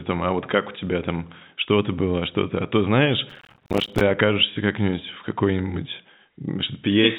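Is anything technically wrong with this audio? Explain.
Yes. From 3.30 to 4.01 s, right after "то знаешь", there is processor overload crackle. The processor missed dozens of deadlines in a row. Each miss left a hard-edged silent gap, spacing that fits a buffer of about 5 ms. Together they sound like gritty tearing that stops when the load passes. The band cut at 4 kHz comes from G.711 telephone coding, which is working normally.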